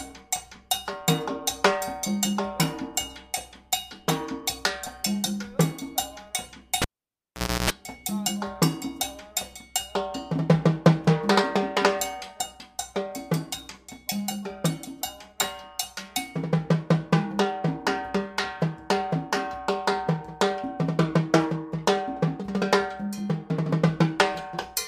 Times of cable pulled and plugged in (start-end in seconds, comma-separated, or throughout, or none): 6.82-7.70